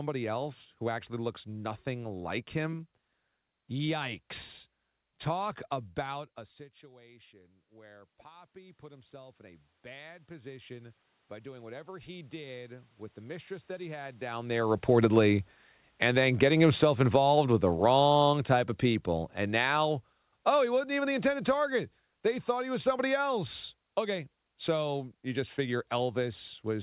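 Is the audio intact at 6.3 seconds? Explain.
No. From 6.15 s to 17.55 s the automatic gain control is rising: the talker moved away from the microphone around 6 s, the input fell by about 24 dB, and the gain control responded by slowly raising its gain by about 12 dB. At 6.3 s this climb has just begun, so the voice and the room noise swell together over the next eleven seconds, and only half of the lost level comes back.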